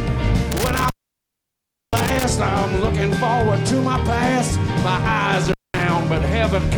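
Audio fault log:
0.51–2.24 s and 5.45–5.83 s, intermittent contact: crackly dropouts to faint hiss, lasting about 1.03 s then 0.21 s, as a loose cable or plug briefly opens.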